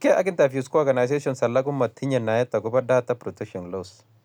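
Nothing in this speech recording stood out as a technical problem on listening.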